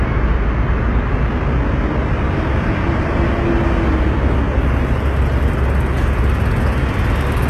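HE-AAC compression, throughout this everyday sound, likely at a very low bitrate near 16 kbps: the treble is rebuilt from copied lower bands, sounding gritty and metallic, with nothing above 12.3 kHz.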